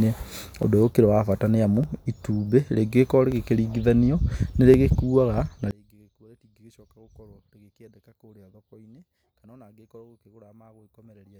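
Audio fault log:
0.63, 1.84, 3.32, 4.74 and 9.21 s: dropped samples. Each is a single sharp click, visible as a thin vertical line across the spectrum. The likely cause is a fraction of a millisecond of samples missing from the stream, so the waveform jumps abruptly from one value to a later one. The gap is far too brief to remove any audible part of the speech. Only the discontinuity itself is heard, as a broadband tick at each of the five points.
5.71 to 11.40 s: one channel inverted. When the two channels are summed to mono, the speech falls by about 29 dB and nearly disappears, leaving only a faint residue. This likely comes from one channel having reversed polarity. The centred voice is common to both channels, so in the sum the two copies oppose each other and cancel. Only the small difference between the channels survives, which is why so little of the sound remains for the rest of the clip.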